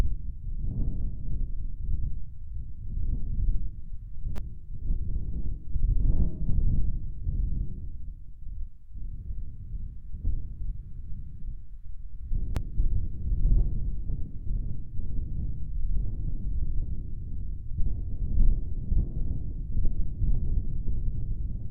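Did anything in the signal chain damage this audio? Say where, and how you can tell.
Yes: a repeated buffer at 4.36 to 4.38 s and again at 12.55 s, in the driver or buffer stage. Each event is a brief buzz in the sound rather than a stutter. A tiny piece, which fits a 5 ms buffer, loops several times with a hard join at each restart, giving a rough 200 Hz rasp. New audio arrived late, so the device replayed its last buffer, and roughly 20 ms and 15 ms of the real sound went missing.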